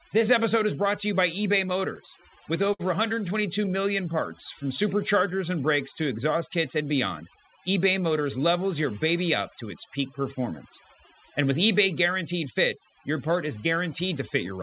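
Throughout the speech, overdone noise removal has pushed the background down, breaking it up into twinkling specks. Unlike plain hiss or dropouts, it comes from whole frequency bands being switched off.

From 1.7 to 2.81 s, repeated stalls (stutter) occur: eight pauses, the longest 59 ms, are filled by continuing the last sound. That makes about 119 ms of dragging hesitation with nothing lost, unlike true gaps.

Between 3.41 and 4.07 s, scattered short gaps appear as about five isolated ticks or smears, each around 10 ms at most. They are briefer than the stutter.

From 3.81 to 4.68 s, just before "superchargers and brakes to", a jitter buffer slow-down stretches the sound by 62 ms to 94% speed. Pitch stays steady, which separates it from a simple tape-like slowdown.

From 6.81 to 7.37 s, right after "brakes to exhaust kits", a jitter buffer speed-up trims roughly 70 ms, hurrying the speech to 109% at unchanged pitch. 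That is the reverse of the earlier drawn-out stretch.

The band-limited sound, with nothing above 4 kHz, fits a G.711 A-law call path at 64 kbps.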